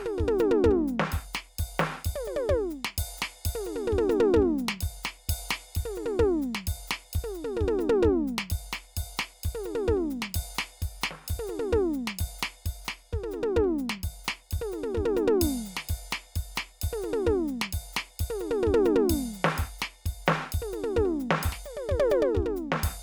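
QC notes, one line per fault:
No faults heard in this music.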